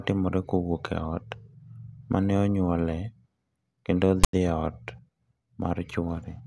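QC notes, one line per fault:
4.24–4.33 s, file tags played as audio: a block of text metadata with zero padding was decoded as if it were samples, giving about 0.1 s of harsh, hard-edged static. The character bytes sit mostly in one numeric range, so the rasp is loud and pushed to one side of zero, while the padding decodes as dead digital silence. On the waveform it is a lopsided, clipped-looking slab beside a flat line. On the spectrogram it is a broadband vertical stripe with abrupt edges.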